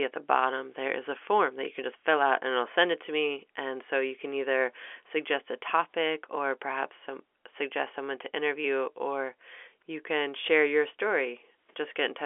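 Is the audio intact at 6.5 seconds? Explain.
Yes, at 6.5 seconds the speech is intact, with only the narrow, band-limited sound of G.711 telephone coding, which lets nothing through above about 3.8 kHz.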